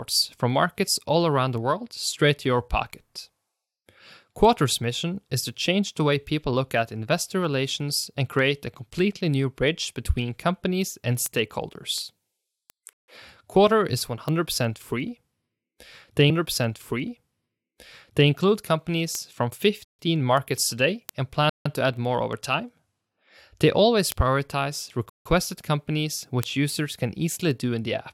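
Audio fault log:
12.93–13.08 s, 19.85–19.99 s, 21.50–21.66 s, 25.10–25.26 s: block of digital silence. 145–160 ms zero blocks cut the speech abruptly, leaving a short hole.
16.29–18.29 s: stream segment repeated. The player fetched or queued one segment twice, so about 2.0 s of speech plays again after a small blip at the jump back.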